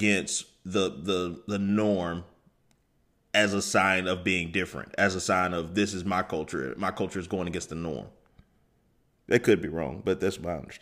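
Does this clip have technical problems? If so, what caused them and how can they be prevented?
No, there's nothing technically wrong to hear in this speech, so there's no problem to trace back or prevent here.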